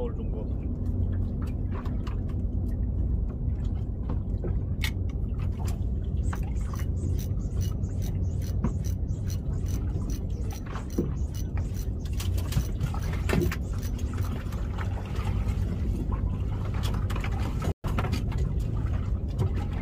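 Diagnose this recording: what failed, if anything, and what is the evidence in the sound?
The sound cuts out abruptly at 17.72 s and stays silent until 17.84 s, a gap of about 120 ms. This is a playback stall at the buffer stage, likely caused by the player running dry or its output thread being blocked.

Straight after the gap, from 17.84 to 18.64 s, the audio runs hurried at about 1.15 times normal speed with unchanged pitch. This is time-compressed catch-up: the player trims small overlapping pieces and cross-fades them to absorb the backlog.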